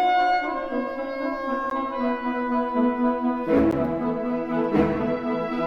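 Two short silent holes break the audio, at 1.70 s and 3.71 s, each about 13 ms long. They come from a gap between chunks: the audio was split into 2.0 s pieces and silence was inserted at the joins. Unlike a dropout, where a stretch of sound is lost and the audio resumes further along, the sound here picks up exactly where it stopped. The same length and the regular 2 s spacing also point to chunk joins.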